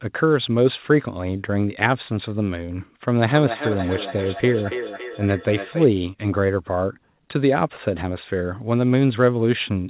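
From 3.29 s to 5.92 s there is feedback echo between two devices: a second device in the same room replays the speech, the first device's microphone picks it up again, and neither echo canceller removes the other's playback. Each phrase returns about every third of a second, thinner and more ringing on each pass, peaking about 9 dB below the direct speech. Across the narrowband call audio, cut off at 4 kHz, the repeats sound tinny and hollow.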